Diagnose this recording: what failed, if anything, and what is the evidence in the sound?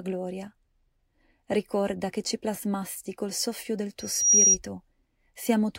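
Loudspeaker feedback squeal in the acoustic loop between loudspeaker and microphone, ahead of any digital stage. Just after "plasmasti col soffio del", at 3.99 s, a pure tone near 5.7 kHz swells over about a third of a second to about 10 dB above the speech, then stops at 4.58 s. Loop gain exceeded unity at that one frequency, so it fed on itself. The gradual swell and single pitch separate it from a steady electrical whine or a clicky digital glitch.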